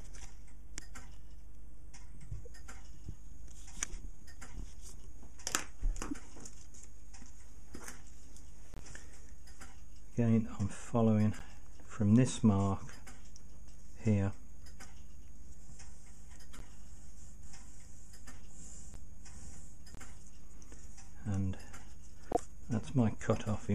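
Corrupt frames decoded at 6.11–6.13, 8.74–8.80, 11.39–11.42, 16.54–16.62, 18.94, 19.95–19.99 and 22.32–22.37 s: damaged frames played anyway spray misplaced energy, giving brief chirps and noise blips. The 22.3 s burst is loudest.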